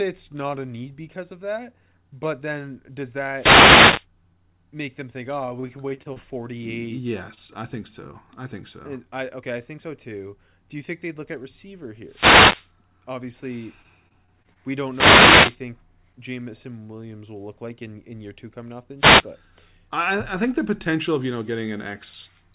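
At 3.32–4.07 s, just after "that but then does", a wireless microphone noise hit swishes in as the FM radio link fades. On a spectrogram it shows as a broadband hiss smear over the speech bands, and on the waveform as a raised noise floor. From 5.46 to 7.50 s, repeated packet loss makes the speech choppy and robotic. Twelve gaps, none longer than 27 ms, are patched by stretching the preceding sound. On a spectrogram these appear as brief frozen, repeated harmonic slices. A second noise hit follows at 12.05–12.73 s, after "at receiver". Robotic loss returns at 13.83–14.57 s with six gaps. A third hiss burst at 14.89–15.60 s contains a short concealed packet loss at 15.43–15.47 s, where a 20 ms hole was filled by continuing the previous sound. It is heard as a brief smear and appears as a tiny smoothed patch on the spectrogram. The last noise hit, at 18.98–19.25 s after "two coming off the", is a quick static swish. 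Throughout, the spectrogram stops at 4 kHz, which fits a narrowband G.711 call path.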